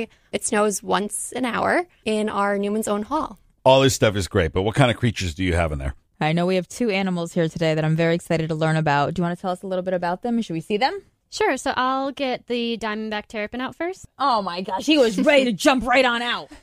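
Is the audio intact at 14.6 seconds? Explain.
Yes, the audio is intact at 14.6 seconds, with no dropout, click, distortion or other fault audible at that moment.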